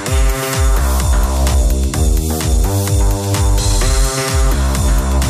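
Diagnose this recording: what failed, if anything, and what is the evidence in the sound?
Nothing failed: there is no evidence in the sound of any fault at any stage of the chain.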